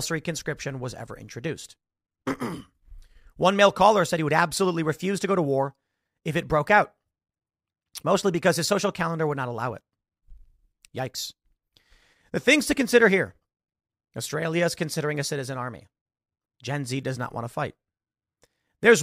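No technical faults are audible.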